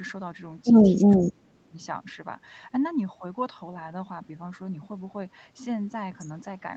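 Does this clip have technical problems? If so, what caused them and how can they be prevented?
Yes. The speech dips briefly from 1.07 to 1.11 s, then drops sharply from 1.28 to 1.75 s. This is likely speech suppressed in double talk: the echo canceller mistook the overlapping talk for echo and turned it down. Using headsets or an echo canceller with better double-talk detection would prevent it.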